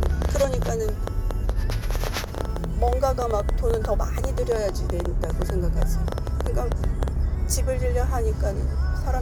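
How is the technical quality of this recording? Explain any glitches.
The recording is marred by one clear fault, a persistent run of clicks through most of its length.

A train of clicks runs from 0.03 s to 7.09 s, roughly seventy of them at about 8.5 per second, spaced unevenly. Such repeated, near-identical pulses most likely come from electrical interference from nearby equipment or a faulty connection or power supply. Each click peaks about 10 dB above the surrounding sound, so the ticking pops sit clearly on top of the audio and remain audible in quieter stretches.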